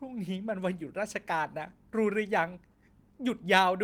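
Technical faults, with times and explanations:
2.71–2.76 s, short stall from a late packet: one stretch of the speech is held too long, with a faint buzz or dip where about 30 ms of stretched sound was filled in while the jitter buffer sat empty waiting for the overdue packet. The speech then resumes exactly where it stopped, with nothing skipped, so timing afterward runs about 30 ms later. That intact continuation separates it from a lost packet, where sound would be missing rather than delayed.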